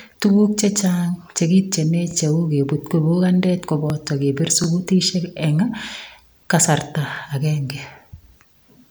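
At 2.11 to 2.14 s, 4.64 to 4.66 s and 7.16 to 7.19 s the speech stutters briefly. These are overlapping chunks: the audio was handled in 2.5 s blocks, each starting about 25 ms before the previous one finished, so that sliver plays twice at every join. Unlike a dropout, nothing goes missing; a fragment repeats, giving a tiny doubled click. The even spacing of about 2.5 s also sets it apart from random glitches.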